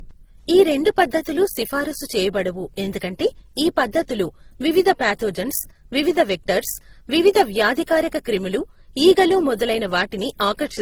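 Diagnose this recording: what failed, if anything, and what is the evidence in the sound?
Codec stage, throughout the speech: two layers of compression artefacts heard together, nothing above 20.2 kHz. Likely transcoding between lossy codecs, pointing to MP3 then low-rate Opus.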